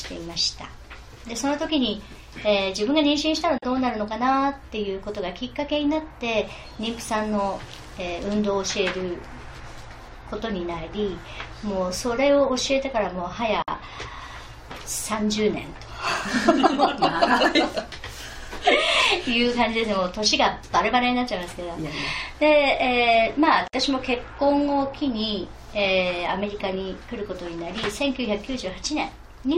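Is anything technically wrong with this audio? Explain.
Yes. There are gaps at joins of encoded pieces at 3.58, 13.62 and 23.68 s, every 10 s, lasting about 43, 54 and 54 ms. Separately encoded chunks were butted together untrimmed, so encoder delay and end padding leave short silences with smeared edges before the sound resumes.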